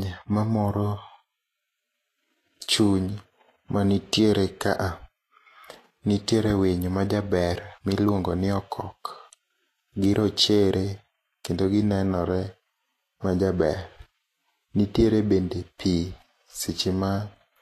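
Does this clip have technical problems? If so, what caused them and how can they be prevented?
Yes. Across the whole speech clip the treble sounds hissy and grainy, tones are roughened, and consonant onsets are smeared, with nothing above about 14.2 kHz. This is likely Vorbis compression at low quality: the encoder keeps a smooth spectral floor but quantises the upper residue so coarsely that fine detail turns into noise-like texture. The audible damage fits a bitrate near 33 kbps. A spectrogram would show a hard ceiling at 14.2 kHz and speckled, patchy energy beneath it, while the waveform's attacks look softened. Encoding at a higher Vorbis quality setting, or keeping a lossless master, would prevent it.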